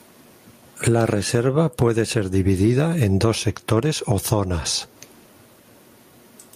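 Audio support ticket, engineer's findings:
Gain pumping throughout the speech. Level swing around 25 dB. Dynamics flattened, loud and quiet passages squashed toward one level. Likely cause: input gain set far too high for the mic, with a fast limiter or compressor clamping every peak and releasing in the gaps.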